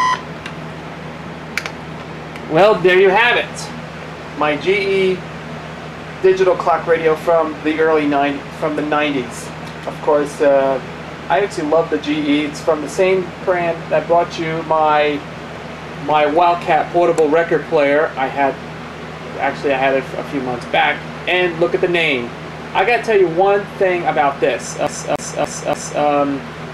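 Near the end, from 24.87 to 26.02 s, the CD gets stuck on one turn. A scratch keeps kicking the laser back a track, so the same 290 ms slice plays four times over, with a tiny mute at each jump, giving that quick, even skipping-disc stutter.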